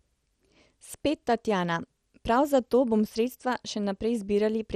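From start to end the speech carries a dull, gurgling, granular coating, with the brightest parts of the sound fading in and out and nothing above 15 kHz. This is most likely MP2 compression at a bit budget that fits around 64 kbps, where the coder runs short of bits, switches off upper sub-bands and quantises the rest coarsely. A spectrogram would show a hard ceiling at 15 kHz and blocky, flickering patches in the upper bands.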